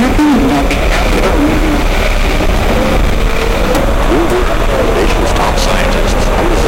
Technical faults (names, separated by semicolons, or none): timecode bleed